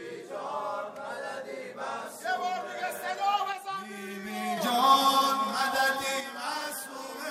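At 3.53 s the level falls abruptly by about 6 dB and stays down until 4.57 s, then again from 6.21 s to the end at 7.30 s. This is likely one channel drops out: after the mono sum, shared content halves and one-sided material vanishes.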